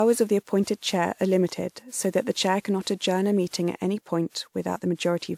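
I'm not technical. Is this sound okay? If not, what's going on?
No, throughout the speech there's generation loss: a swirly, hollow, smeared sound, likely from being re-compressed about seven times, worse than one rough compression would cause.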